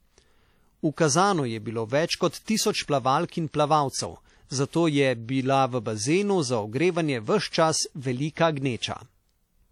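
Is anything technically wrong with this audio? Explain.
Yes. Throughout the speech there is plainly audible ringing and a washy smear, with a hiss that breathes along with the signal and nothing above 19.4 kHz. This is likely WMA compression: long transform blocks spread quantisation noise in time, which fits a low bitrate around 48 kbps.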